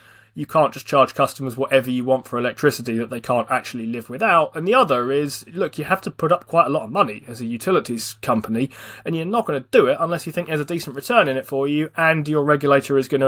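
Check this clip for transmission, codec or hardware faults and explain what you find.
No transmission, codec or hardware faults turn up in this clip.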